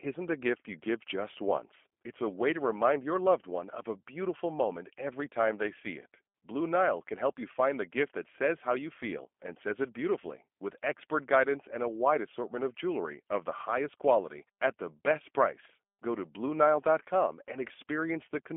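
From start to finish the speech carries the sound of the G.729 codec, plainly audible. The voice is rebuilt from a vocal tract model, a pitch predictor and a handful of pulses per frame rather than from the waveform itself, which fits G.729A at 8 kbit/s. That gives it a slightly rough, synthetic edge. The line band runs from about 250 Hz to 3.4 kHz, and nothing comes through above 3.5 kHz, so the top end sounds dull and boxed in.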